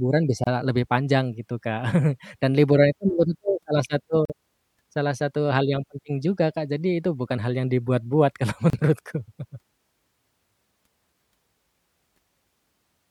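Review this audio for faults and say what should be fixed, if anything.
The speech breaks three times with a gap at a join of encoded pieces: at 0.44 to 0.47 s (about 28 ms, just before "lebih panjang gitu"), at 4.25 to 4.30 s (about 45 ms), and at 8.70 to 8.73 s (about 32 ms). Each piece was encoded on its own and joined untrimmed, so the encoder's start-up silence and last-frame padding sit between them. The speech then resumes where it stopped. On a waveform each gap is a short flat stretch with smeared edges. On a spectrogram it is a thin vertical blank band across all frequencies, its borders slightly smeared by the codec. To prevent it, trim each piece's encoder delay and padding before joining, or encode the whole recording in one pass.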